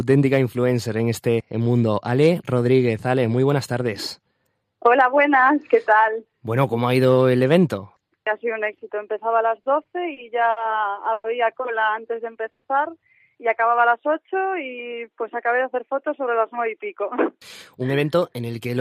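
Repeated stalls (stutter) break up the audio from 9.63 to 10.59 s. Four short halts, the longest about 60 ms and together 140 ms, take up roughly 15% of that stretch. Each time, packets came in late or slower than playback consumed them, so the jitter buffer emptied and the receiver held the last sound until fresh data arrived. Nothing drops out, but the flow drags and hiccups. A call audio freeze follows at 11.13 to 11.26 s, where the sound hangs as a sustained continuation of its last moment for 110 ms without falling to silence, then resumes exactly where it stopped. The same happens at 12.51 to 12.66 s for 130 ms. Each freeze is likely the result of packets being held up in transit and the buffer running dry, so the pause is inserted into the timeline rather than cutting anything out. Jitter buffer slow-down appears at 12.02 to 12.42 s, where playback runs at about 93% speed and gains 35 ms. 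It is stronger at 13.63 to 15.22 s, where playback runs at 90% and gains 171 ms. The receiver was rebuilding its reserve by repeating single pitch periods and pause fragments, so the audio stretches out at unchanged pitch, with lengthened sounds. Jitter buffer speed-up closes the clip at 17.81 to 18.77 s, running at about 109%. After the buffer had overfilled, the receiver trimmed pitch-period-sized slices, about a tenth of a second in total, to reduce the delay. The audio sounds hurried but keeps its pitch.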